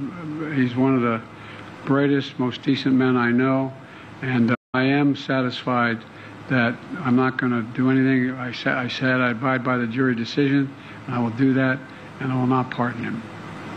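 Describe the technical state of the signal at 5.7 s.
At 5.71 s there is a corrupt FLAC frame. Damaged bits send the decoder's prediction off course, so it rebuilds wrong sample values from the damaged bit on. The result is a brief glitch peaking near -21 dBFS. Clean audio resumes immediately, which points to a single damaged frame.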